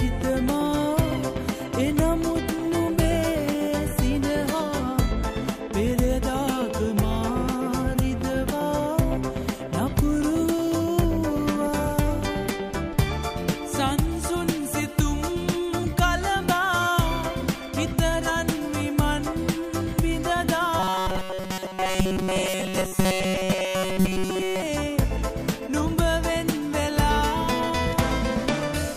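From 20.8 to 24.6 s, new audio likely arrived too seldom, giving robotic sound from repeated short buffers, a rigid, metallic 188 Hz buzz.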